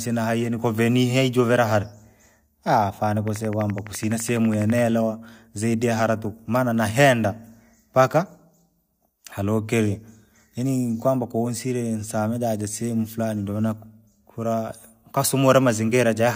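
Likely interference or a faulty connection injects a train of clicks from 3.28 to 4.79 s: about twenty regular ticks, 11.9 per second, poking a few dB above the speech.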